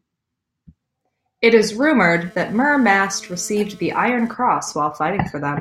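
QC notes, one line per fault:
1.82–4.72 s, GSM phone buzz: a hard, raspy buzz at 217 Hz with a dense stack of harmonics sits about 27 dB below the speech and keeps breaking up and returning, as a nearby 2G phone passes data in bursts and the audio circuit rectifies its radio pulses. Unlike mains hum, which is smooth and steady at 50 or 60 Hz, this stutters, is gritty, and takes no account of the speech.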